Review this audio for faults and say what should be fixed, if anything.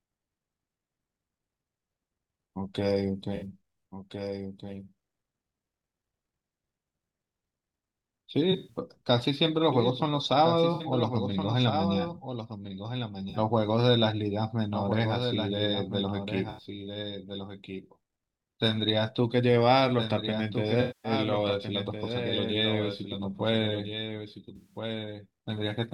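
A doubled audio track runs throughout. A full-band copy of the speech, about 10 dB quieter, trails roughly 1.5 s behind, likely from a second, slower capture path. On a spectrogram every pattern reappears faintly and undecayed about 1.5 s later. Capture through a single path and remove any duplicate loopback or monitor input.

AAC frame loss with concealment causes smeared, noisy patches at 3.35, 8.52, 10.73, 13.29, 16.50, 20.81 and 24.56 s, each lasting 43 to 235 ms, where the decoder fills gaps from earlier spectra. On a spectrogram these show as blurred smears, and on the waveform as flattened envelope patches. Protect the stream with forward error correction or a more reliable transport.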